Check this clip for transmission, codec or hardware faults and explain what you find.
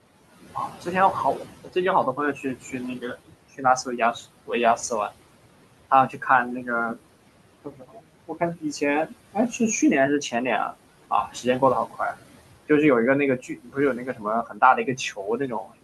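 The main trouble here is the noise suppressor: it's working hard on the room noise and catching the speech as well.

Noise suppressor artifacts run through the whole clip. The suppressor pulls the steady background down by about 17 dB, frame by frame, so the noise drops away in the gaps and swells back under the talking.

Speech cut by the noise suppressor turns up five times: 2.16–4.15 s (about 16 dB down, a few hundred milliseconds in total), 5.9–6.23 s (about 11 dB, a brief moment), 7.64–9.6 s (about 19 dB, the worst at well over half a second), 11.28–11.99 s (about 12 dB, a short stretch), and 13.39 s through to the end (about 18 dB). In each one the suppressor mistook quieter speech for noise and ducked it along with the background, so soft consonants and word endings sound swallowed or faint. The room noise itself, sitting about 16 dB under the speech, is part of the recording rather than a fault, and it's why the suppressor is so busy.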